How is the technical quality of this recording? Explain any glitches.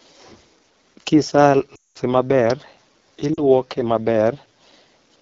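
The recording is technically poor, with wideband mobile-codec damage throughout and two dropouts from lost speech frames.

AMR wideband (HD Voice) codec, throughout: the speech has been squeezed through AMR-WB at a very low rate. The codec rebuilds speech below 6.4 kHz from a pulse-excited vocal tract model and fills the top band with shaped noise. Here the consistent roughness and raspy grain fit the 8.85 kbit/s mode, one of the lowest, where the model lacks the detail to keep the voice smooth.

Lost AMR speech frames, 1.75 to 1.98 s and 3.34 to 3.40 s: corrupted frames failed their checks, so the decoder kept repeating the last good pitch and vocal tract settings while lowering the gain. The longer gap, about 200 ms, drops to near silence within two frames, consistent with roughly ten consecutive 20 ms frames missing. The 40 ms gap, which fits two frames, is a short dip before the speech returns, a little weak at first.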